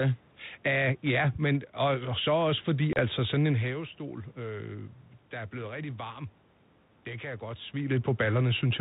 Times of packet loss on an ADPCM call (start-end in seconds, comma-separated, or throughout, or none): 2.93-3.00